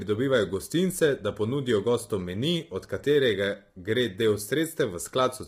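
From start to finish, the speech sounds rough and grainy. Noise fills the gaps between the pitch harmonics, so the voice loses its clean tonal structure. The top band sounds dulled and partly synthetic. The likely cause is heavy low-delay AAC compression, as used in video calls. Its short frames resolve harmonics poorly and need more bits. Damage this strong fits a bitrate around 24 kbps.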